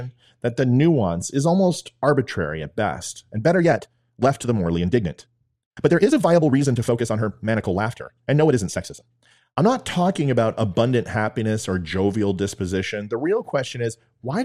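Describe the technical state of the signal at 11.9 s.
At 11.9 s the speech signal is intact, with no audible technical fault at that moment.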